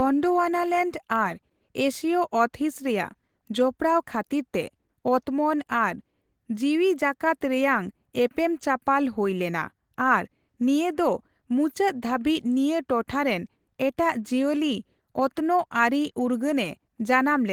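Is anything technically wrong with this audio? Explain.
No, nothing technically wrong can be heard here.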